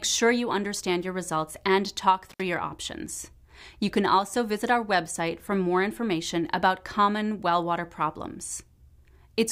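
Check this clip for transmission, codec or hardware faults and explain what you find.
One hardware fault is present. Intermittent contact at 2.30–2.42 s: a loose cable or plug briefly opens, cutting the sound for about 79 ms with crackle at both edges.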